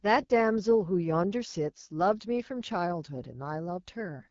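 Throughout, AMR wideband (HD Voice) coding leaves the speech rough and raspy, which fits one of its lowest rates, about 8.85 kbit/s. It still reaches 7 kHz, unlike narrowband telephone audio.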